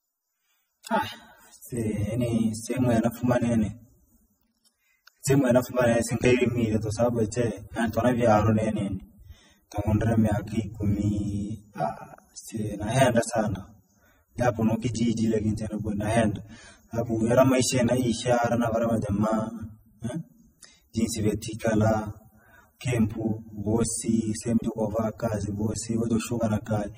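Transcoding between lossy codecs runs throughout the recording, from start to end. The speech carries two layers of coding damage heard together: smeared, swirly texture, plus a second grainy, watery roughness laid over it. The likely cause is a low-rate AAC-LC encode, consistent with about 24 kbit/s, re-encoded to MP3 at around 48 kbit/s. The second encoder spent its bits on the first one's artefacts and added its own, while the spectrum ends at 21.4 kHz.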